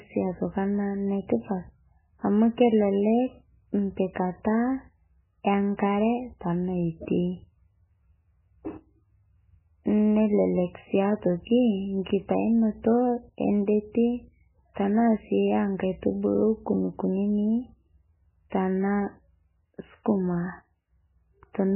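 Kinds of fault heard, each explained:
MP3 compression: throughout, the speech stops dead at 3 kHz and swirls wetly, likely an MP3 encoder starved of bits, fitting a rate near 9 kbps; it cut all treble at one frequency and flickered weak frequency lines on and off between frames.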